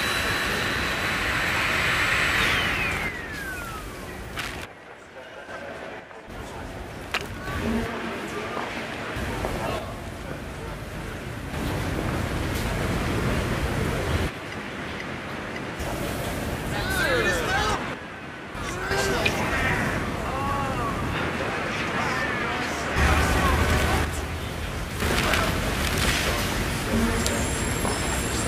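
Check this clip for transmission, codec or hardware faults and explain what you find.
One fault recurs five times: the level drops abruptly by about 6 dB at 3.09–5.49 s, 6.00–7.47 s, 9.79–11.53 s, 17.94–18.91 s and 24.05–25.02 s. This is likely one channel dropping out before a mono sum. A gain fault would not remove material unique to one side.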